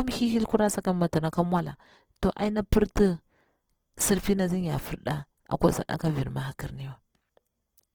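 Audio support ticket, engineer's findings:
Grainy, rough texture on speech throughout the clip, plainly audible. Bandwidth stays full, with content reaching about 20.2 kHz. Likely Opus compression in CELT music mode at a starved bitrate, fitting roughly 16 kbps. Band energies are kept but the fine detail is filled with noise, so the voice turns coarse rather than swirly.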